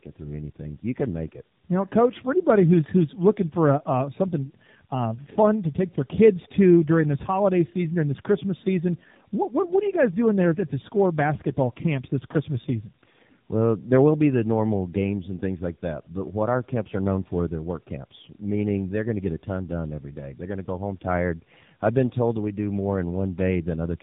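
Throughout, tandem speech coding: the speech passed through G.723.1 and then AMR-NB, with an A-law link between. It sounds rougher and more warbly than either codec alone, with nothing above 3.8 kHz.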